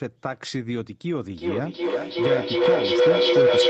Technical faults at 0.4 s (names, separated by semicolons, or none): none